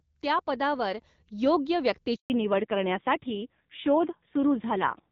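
Handover gap, 2.16 to 2.30 s: while the call switched networks, no speech frames arrived, so the speech drops away and leaves 140 ms of silence until the new link starts.

Fallback to narrowband, from 2.30 s to the end: the call dropped from the clear wideband sound heard earlier to an older narrowband codec, which fits a low-rate AMR-NB mode. Nothing is heard above 4 kHz, so the speech turns dull and rougher.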